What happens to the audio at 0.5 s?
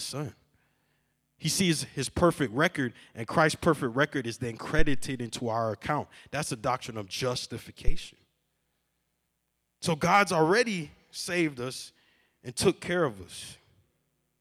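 Nothing goes wrong at 0.5 s; the audio is intact at that moment, with no dropout, click, distortion or other fault.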